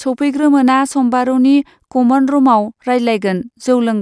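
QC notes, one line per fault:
No faults heard anywhere in this clip.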